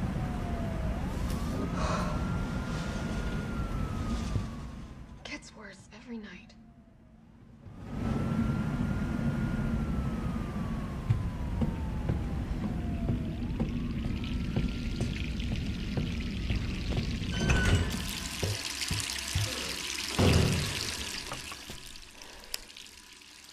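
From 20.90 to 22.11 s the level drops by roughly 15 dB, and the fade produces zipper noise. The gain falls in coarse 2 dB steps, about ten a second, with nothing smoothing the jump between one setting and the next. Each abrupt step puts a small discontinuity into the waveform, so the fade carries a rapid ticking, zipping texture for as long as the level is moving.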